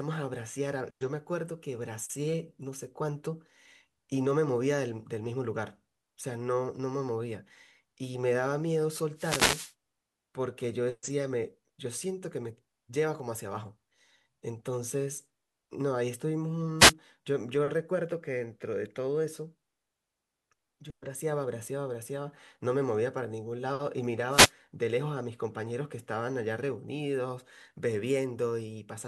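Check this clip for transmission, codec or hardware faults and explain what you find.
Three wireless microphone noise hits break into the speech. They sit at 9.15 to 9.74 s, 16.79 to 16.93 s and 24.29 to 24.52 s. Each is a brief swish of static laid over the voice. The first is the longest, at over half a second. In each one, the radio link from an analogue FM microphone fades as reflected signals cancel. The receiver's own noise then rises and partly buries the speech.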